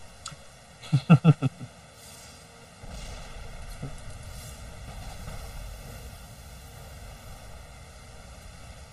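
The audio sounds hollow and phasey from start to finish, with fixed notches, the lowest near 300 Hz. This is channel delay (comb filtering): one channel arrives about one and a half milliseconds late, and summing to mono cancels evenly spaced frequencies.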